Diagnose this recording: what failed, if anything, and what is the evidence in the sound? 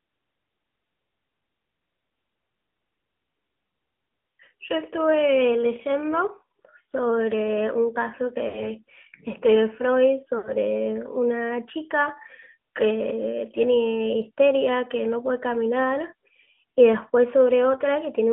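Codec stage: AMR narrowband mobile codec throughout. The speech sounds buzzy and synthetic, and the spectrogram is empty above 3.4 kHz and below 200 Hz, which fits a narrowband phone line; the codec runs at 10.2 kbps.

Network stage: lost AMR speech frames at 8.48–8.64 s and 10.38–10.54 s. Each gap, about 60 ms, is smeared and fading on the waveform, consistent with three concealed 20 ms frames.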